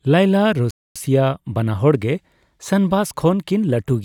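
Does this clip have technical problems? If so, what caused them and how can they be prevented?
Yes. The speech cuts out completely from 0.71 s to 0.96 s, a silent gap of about 250 ms, and then carries on. This is a playback stall, most likely caused by the player running out of buffered data or having its audio thread blocked, so nothing reached the output until it recovered. A dropout of a few milliseconds sounds like a click or tick. This gap is a clear, audible pause. A larger playback buffer and a high-priority audio thread would prevent it.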